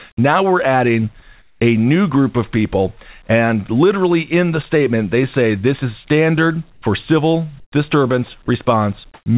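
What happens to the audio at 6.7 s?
Discontinuous transmission likely halted the stream, so from 6.72 to 6.82 s comfort noise replaces the background: a steady, featureless hiss at unchanged level.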